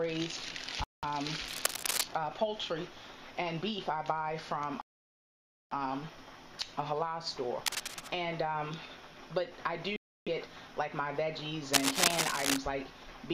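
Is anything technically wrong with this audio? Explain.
Yes, there are two recurring faults.

A Bluetooth stall occurs at 0.84 to 1.04 s, 4.81 to 5.73 s and 9.96 to 10.28 s. The sound drops to silence for about 0.19 s, 0.9 s and 0.3 s, then resumes. The likely cause is radio interference delaying packets until the headphone buffer emptied.

Cable scratch noise appears at 1.46 to 2.04 s, 7.66 to 8.12 s and 11.73 to 12.58 s as dense, uneven scratching about as loud as the audio, and a little louder in the last burst. It likely comes from a worn cable or connector whose contact resistance fluctuated as it moved.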